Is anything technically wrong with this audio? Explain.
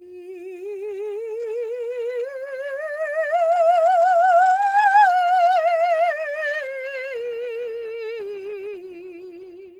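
No, nothing in this music recording points to a technical fault.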